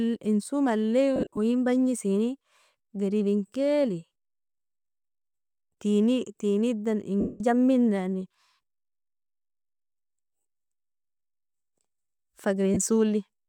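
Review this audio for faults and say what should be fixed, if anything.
Lost LE Audio frames break up the speech three times: a scattered burst from 1.16 to 1.38 s, with the longest gap around 50 ms; a denser stretch from 7.20 to 7.41 s; and a brief dropout at 12.74 s. The LC3 decoder fills each gap by repeating the last spectrum with randomised signs, so the voice turns to a hissy smear that fades during the longer runs. The gap lengths fit 7.5 ms frames. On a spectrogram, harmonics blur into flat vertical noise bands, and the waveform shows smeared, decaying patches. The light codec softening elsewhere is faint. To prevent the dropouts, improve the Bluetooth link margin or enable retransmission and a larger jitter buffer.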